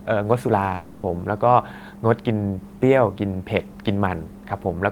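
Speech clip where, from 0.75 to 1.05 s, the voice smears into a fading buzz and resumes with about 280 ms missing, likely a long network dropout concealed by the receiver.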